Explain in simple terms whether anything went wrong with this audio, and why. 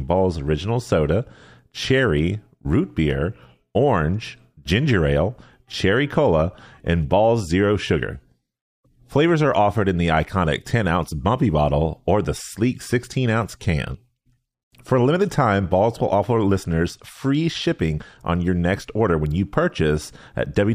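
Listening closely to the speech here, nothing went wrong that a listener would notice, so there is no problem to explain.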